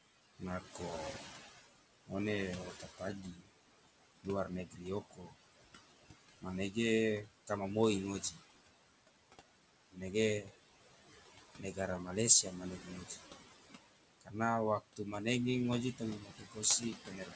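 Noise suppressor artifacts run through the whole clip. The suppressor pulls down the bands it judges to be steady background by about 19 dB, frame by frame. The room noise, which sits about 12 dB under the speech, falls away in pauses and returns beneath each phrase. The audio stops at 8 kHz, which fits a wideband call codec such as G.722.

Speech cut by the noise suppressor occurs in five stretches where the suppressor mistakes parts of the speech for noise and turns them down along with the background. From 0.39 to 5.35 s, about a second's worth of material is dipped by up to about 18 dB. From 6.41 to 8.40 s, roughly a third of a second is hit, by up to about 15 dB. From 9.92 to 10.51 s, a short fraction of a second drops by up to about 17 dB. From 11.59 to 13.19 s, about half a second loses up to about 12 dB. From 14.21 s to the end, the deepest dip is about 19 dB. Word endings and soft consonants sound swallowed or faint.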